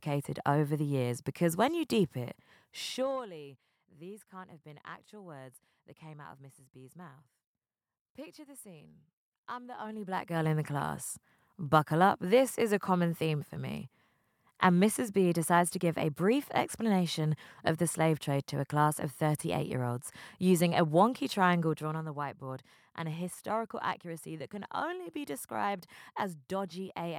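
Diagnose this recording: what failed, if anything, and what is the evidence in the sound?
Zipper noise at 2.74–3.30 s (after "when you deep it"), 9.75–10.50 s (after "the scene I'm") and 21.64–22.06 s (after "olds using a wonky"): gain moves of about 20, 20 and 10 dB are applied unsmoothed in 2 or 1 dB steps, roughly twenty per second, each step clicking.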